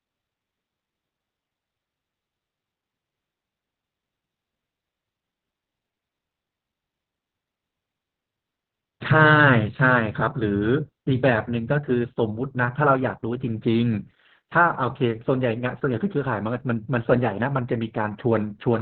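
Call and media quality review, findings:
Opus voice compression, entire clip. Speech muffled, hoarse, faintly robotic; nothing above 4.5 kHz, narrowband. Probable component: encoder running SILK linear-prediction mode at a rate that sounds near 8 kbps, excitation coded coarsely. Differs from a plain low-pass or band-limited channel: bandwidth loss alone dulls speech, but the rasp and robotic edge come from the coarse coding.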